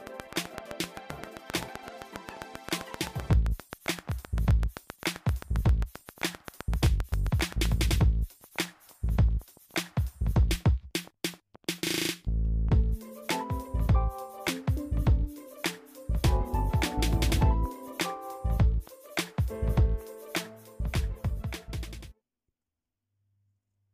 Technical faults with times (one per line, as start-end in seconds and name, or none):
0.07-7.66 train of clicks